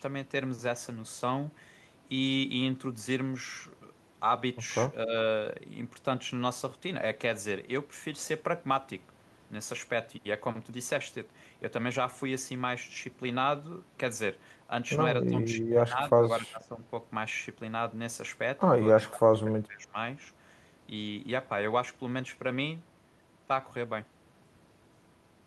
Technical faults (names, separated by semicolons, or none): speech suppressed in double talk